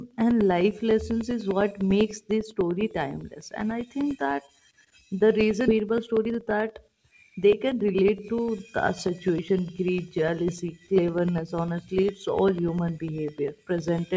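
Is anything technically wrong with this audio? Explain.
Yes, three faults are audible in this speech.

From 0.11 s to 14.08 s there are periodic USB or driver dropouts: every 0.1 s a background task stalls the audio path and roughly 2 ms is replaced by silence. The result is a steady ten-per-second ticking, heard only under speech. Its strict regularity and very short gaps set it apart from random network loss.

At 5.68 s there is a skip ahead. Around a second of audio was dropped while later audio was already waiting, so playback jumps straight across the missing stretch with no silence filling it. This is an abrupt splice, not a gap or a slowdown.

From 5.77 s to 7.89 s comes a jitter buffer speed-up. After the skip, the buffer still held more than its target, so it trimmed pitch-period-sized pieces repeatedly, removing roughly 300 ms. Speech runs about 15% faster at unchanged pitch, sounding hurried rather than raised in tone.

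The call path's cutoff near 8 kHz fits a wideband codec such as G.722.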